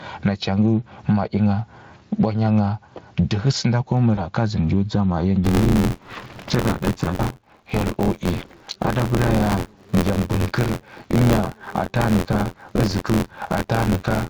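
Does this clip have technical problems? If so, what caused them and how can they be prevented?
Yes. Throughout the clip the level pumps up and down, with a level swing of around 15 dB that squashes loud and soft parts together. This is gain pumping, likely from input gain set far too high so that a fast limiter or compressor clamps down on every peak. Lowering the microphone gain to leave headroom, and easing or bypassing the automatic limiter, prevents it.

From 4.15 to 4.24 s the speech is briefly stretched into a fading sound and stays thin for a moment afterwards. This is VoIP packet loss concealed by the speech codec: about 20 ms of audio went missing, and the decoder extended the previous pitch and filter at falling gain. The weakness carries on past the gap because each decoded frame builds on the one before. A steadier network path, a larger jitter buffer, or forward error correction would prevent it.

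From 5.43 s to the end the audio carries a steady robotic rattle at about 86 Hz, present only while sound is playing. This is buffer tearing: the writer and the playback hardware have slipped against each other, so a small slice of each buffer plays audio from roughly 20 ms earlier, with hard joins on both sides. The rate fits a 512-sample buffer. Keeping the write position properly synchronised with the hardware read pointer prevents it.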